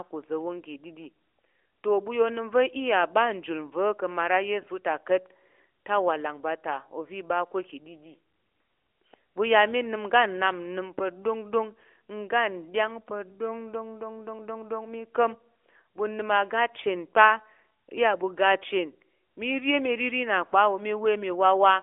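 No technical faults can be heard in this speech, which comes over an AMR narrowband mobile codec line with nothing above about 3.5 kHz.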